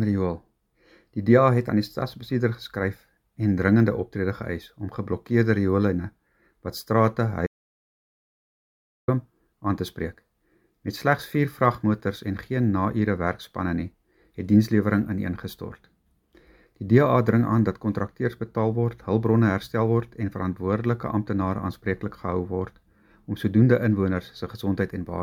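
At 7.47 s the sound cuts off mid-flow into silence, with no room tone at all, and resumes abruptly at 9.08 s, losing about 1.6 s. This audio dropout to silence likely comes from the input briefly disconnecting while recording continued writing silence.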